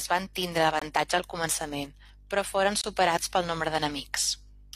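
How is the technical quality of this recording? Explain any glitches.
The recording has two short dropouts, both a gap between stream segments. At 0.79–0.82 s, after "van tindre", and at 2.81–2.84 s, after "al començament però foren", the speech stops dead for about 24 ms with hard edges. Adjacent segments' timestamps leave a hole, which the player fills with silence. The gaps fall 2.0 s apart, matching the segment length, and no audio is lost.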